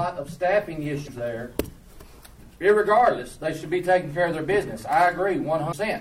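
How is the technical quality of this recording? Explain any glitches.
Two brief glitches mar the recording, each lasting about 50 ms, at 1.03–1.09 s and 5.68–5.74 s. Both come from damaged data in a compressed stream: corrupted frames throw the decoder out of sync until it finds the next frame header.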